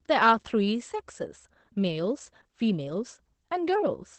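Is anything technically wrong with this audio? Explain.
Yes. Opus voice compression is present throughout. The coarse SILK coding, consistent with about 12 kbps wideband, leaves the speech plainly muffled, hoarse and slightly robotic. A switching supply whistle runs from 2.27 s to the end. A switching power supply's burst-mode oscillation or beating with another supply puts a faint whistle near 10 kHz, drifting between 9.5 and 10.3 kHz, at roughly 45 dB below the speech.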